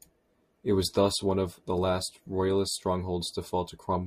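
From 0.0 to 2.57 s the speech plays as an adaptive stream starting at a low bitrate: treble is thin and smeared, consistent with roughly 32 kbit/s Opus, then jumps cleanly to fuller quality, fitting 64 kbit/s. A spectrogram shows the upper band widening abruptly, with no waveform gap.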